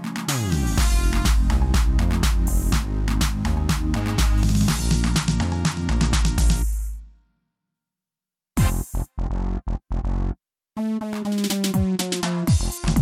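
A Bluetooth SBC bit pool drop runs from 4.85 to 7.74 s and returns at 11.84 s, lasting to the end of the clip. Each time the treble dulls and a gritty noise rises. The encoder has cut its bit budget to keep the link alive, leaving the top sub-bands starved and the rest coarsely quantised. The sound fits a fall from a bit pool of 31 to 13, around 94 kbps.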